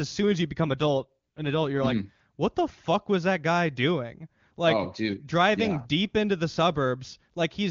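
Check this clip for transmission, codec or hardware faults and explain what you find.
One fault is present: an AMR rate drop between 0.63 and 2.20 s, heard against the AMR wideband (HD Voice) codec that carries the speech. For about 1.6 s the speech turns rough and synthetic, with a buzzy, raspy edge. This fits the network moving the codec from around 23.85 down to about 8.85 kbit/s and spending the freed bits on error protection over a weak link. The bandwidth stays put and nothing drops out. On a spectrogram the upper band still reaches about 7 kHz, but harmonics blur and smear in that stretch. The waveform shows no gap.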